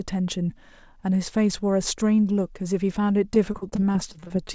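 From 3.18 s to the end, the speech turns choppy, with small pieces dropping out. This is repeated packet loss: about a dozen gaps follow in quick succession, the longest near 40 ms, and each is patched by stretching the preceding sound, roughly 224 ms of concealment over the span. The audio is band-limited, with nothing above 8 kHz, which fits a wideband call codec such as G.722.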